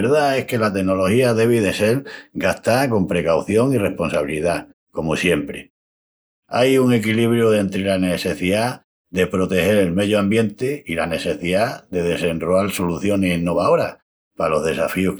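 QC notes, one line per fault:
Nothing stood out on listening to this speech recording.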